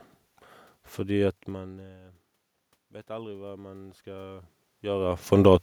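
From 3.06 to 5.33 s, automatic gain rising: after the input dropped by about 24 dB, the gain control slowly lifted its gain by about 7 dB, so voice and room noise swell together. The waveform envelope and spectrogram noise floor climb in parallel.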